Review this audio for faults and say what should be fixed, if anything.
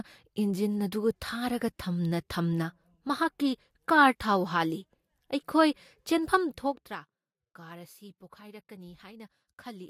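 Zipper noise runs from 6.50 to 7.00 s, while the speech level drops by roughly 15 dB. The drop is applied in 2 dB increments at something like twenty steps per second, with no smoothing between them, so each jump in gain puts a small click into the waveform. Strung together, those clicks become a ticking, zipping texture riding on the speech until the level settles. To prevent it, interpolate the gain per sample or ramp it smoothly across each buffer instead of jumping between stepped values.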